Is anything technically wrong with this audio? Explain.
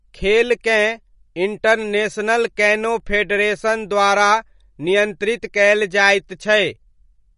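Yes. Across the whole speech clip you can hear plainly audible MP3 compression damage, most likely from a low-bitrate encode. Nothing comes through above about 10.6 kHz, so the top end just stops, which fits an encoder running at something like 40 kbps. Short on bits, it drops the treble and lets faint frequency detail flicker in and out between frames, so the speech takes on a watery, swirly edge and the s sounds get metallic chirps.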